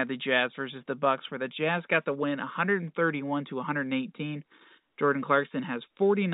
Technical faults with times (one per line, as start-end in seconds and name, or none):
none